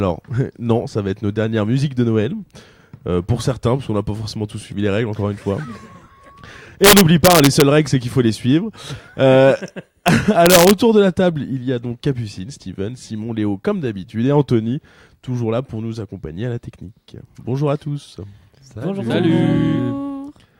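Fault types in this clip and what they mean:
Integer overflow: samples that exceeded the largest integer value wrapped to the opposite sign instead of being limited, so each peak flips across the full range. It is heard as harsh cracks, far sharper than clipping, from 6.84 to 7.62 s, at 10.08 s, and from 10.46 to 10.71 s.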